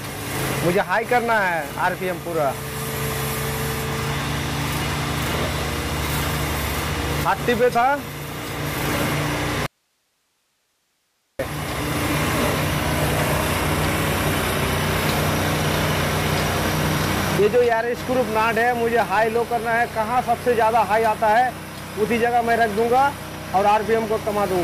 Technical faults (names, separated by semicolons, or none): audio dropout to a faint residue